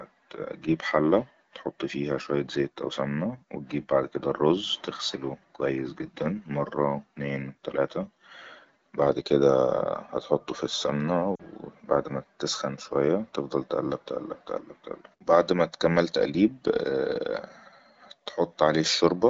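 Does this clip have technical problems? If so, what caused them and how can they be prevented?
Yes. Lost AMR speech frames produce a brief dip that fades toward near silence from 11.35 to 11.43 s, about 40 ms, which fits two 20 ms frames. Unlike a plain dropout, there is no hard silent gap or click: the wideband decoder briefly extends the last good pitch and vocal tract settings at falling gain. Stronger radio coverage or more robust channel coding would keep frames from failing their checksum.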